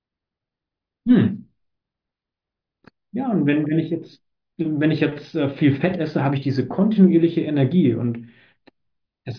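Nothing technically wrong turns up anywhere in this short bit of speech, so there's no fault to point to and no cause to explain.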